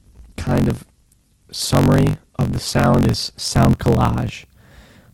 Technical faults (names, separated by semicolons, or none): block size mismatch (truncated); adaptive stream starting at a low bitrate